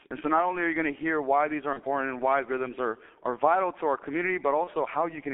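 Throughout, the speech carries G.723.1 codec coding at about 6.3 kbit/s, confined to roughly 200 Hz to 3.4 kHz. Unlike simple band-limiting, which only dulls the sound, this heavy low-rate coding also makes the voice hoarse and smears consonants, because the codec's voice model updates too slowly to follow them.

At 1.73 to 1.80 s and again at 4.64 to 4.71 s there is VoIP packet loss concealed by the speech codec, which fits a single lost 30 ms frame each time. Instead of the silent gap a plain dropout would leave, the decoder stretches the preceding sound into a brief buzzy tone or coloured noise that fades, and the speech stays weak or distorted for a moment after each event.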